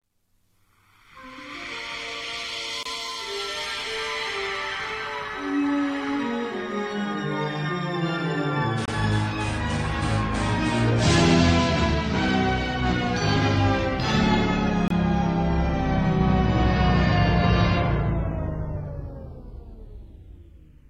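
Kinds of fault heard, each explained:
Gap between chunks: the audio was delivered in 6-second pieces with about 25 ms of silence inserted at each join. Nothing is lost, but the sound breaks off in short holes at 2.83, 8.85 and 14.88 seconds.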